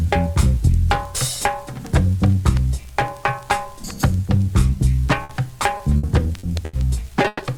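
Packets were dropped or arrived too late in three places in this audio, each time forcing the receiver to cover the hole by extending the last sound it had. Two of these are a burst of packet loss. At 5.23 to 5.31 s about 60 ms went missing, and at 7.27 to 7.41 s about 120 ms did. In each, the concealment stretches what came just before into a held, fading tone rather than silence, and playback then picks up further along with that stretch gone. Between 5.77 and 6.75 s the losses recur as repeated packet loss. Four separate gaps, the longest 80 ms and together about 200 ms, are each patched the same way, so roughly a fifth of that second is synthetic fill. Because the holes come so close together, the sound turns choppy, with short pieces dropping out.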